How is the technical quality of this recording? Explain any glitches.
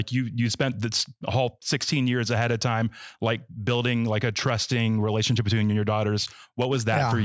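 No glitches or technical faults can be heard here.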